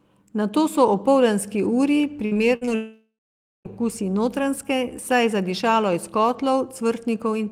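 Repeated packet loss (robotic sound) runs from 2.25 to 2.69 s. Four short holes, the longest 60 ms, were each patched by stretching the preceding sound, so roughly a third of that stretch is concealment. The speech turns choppy, with pieces missing.

A long network dropout follows from 2.75 to 3.67 s. The last sound is carried on as a fading buzz, then about 0.5 s of silence, before speech resumes with that section gone. The likely cause is a stretch where no audio arrived at all.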